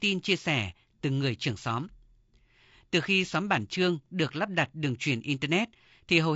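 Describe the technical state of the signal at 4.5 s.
At 4.5 s the speech is still passing through the low-delay AAC compression that runs through the whole clip. It was likely encoded with AAC-ELD at a low rate, which fits about 32 kbps. Its short frames of around 10 ms separate the pitch harmonics poorly and spend bits quickly. The voice comes out plainly rough and grainy, with noise filling the gaps between harmonics and a dulled, somewhat synthetic-sounding top band.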